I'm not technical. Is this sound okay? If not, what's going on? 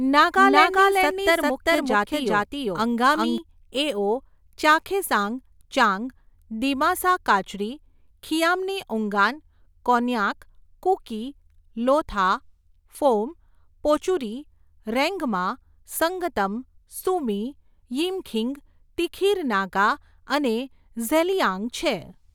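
No, there's a doubled audio track at the very start: from 0 s to 3.38 s the speech plays twice, with a second equally loud copy trailing by almost half a second. It cuts out abruptly just before "એઓ ચાખેસાંગ ચાંગ", likely from a slower second recording path.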